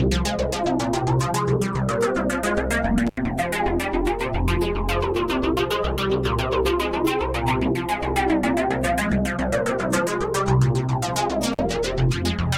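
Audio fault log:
3.07–3.18 s and 11.52–11.59 s, intermittent contact: the signal drops out twice, for about 80 ms and then about 44 ms. Each gap is bracketed by crackle as the connection breaks and remakes, and faint hiss remains while the line is open. This pattern points to a loose cable or plug whose conductor briefly loses contact and then reseats, with the rough, scraping contact edges producing the crackle at onset and release.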